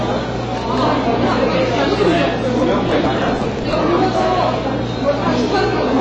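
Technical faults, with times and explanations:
Throughout, hard clipping: a gain stage drives the signal about 8 dB past what the converter or number format can hold, so every peak that exceeds full scale is sliced flat. Only around 2 percent of the samples reach that ceiling, so the damage lands on the loudest moments: a gritty crackle rides each peak, and the squared-off tops spray added harmonics high into the spectrum, giving transients a brittle, splintered edge.
Throughout, AAC compression: nothing is heard above 8.3 kHz, the top of the sound is cut away, and what remains has a plainly audible dull, smeared quality with a watery, fizzy grain on sustained parts and noisy textures. The likely cause is low-bitrate AAC-LC coding, which fits a rate near 24 kbps. At that rate the encoder lowers its bandwidth and starves individual frequency lines of bits, leaving gaps and substitute noise that shimmer from frame to frame.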